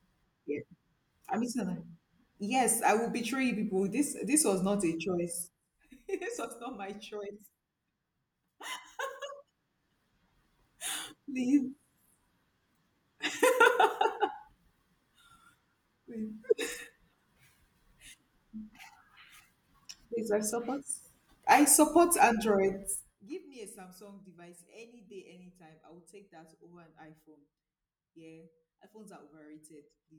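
At 5.16 s the speech gets pulled down by roughly 10 dB over about half a second, ending at 5.71 s. It isn't ramped smoothly, so you get zipper noise: the gain jumps in discrete steps, around 40 a second, and each jump leaves a tiny click. The same ticking rides on a bigger drop of about 25 dB between 22.97 and 23.34 s, where the steps are a coarse 2 dB each.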